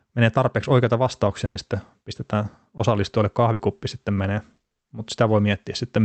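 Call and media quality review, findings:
Burst of packet loss, 1.45–1.57 s, after "menee tarpeeksi oikeita", before "sitten pistetään": last sound held as a buzz or hiss, dying away, then about 20 ms of silence before the sound picks up later on. About 100 ms of fill standing in for about 100 ms of lost audio. Jitter buffer / decoder loss concealment.

Burst of packet loss, 3.53–3.61 s, just before "sitten menee": the same held, fading continuation, about 60 ms long, replacing about 60 ms of real audio, then a jump ahead. Packets lost or late; the receiver extrapolated and attenuated.

Short concealed packet loss, 2.77–2.81 s, right after "sitten pistetään": a brief smear or wobble, then a blend back into the real signal. About 20 ms never reached the decoder in time. Decoder concealment continued the preceding sound, pitched or as shaped noise, then crossfaded back. Opus call path carries through with band-limiting near 8 kHz.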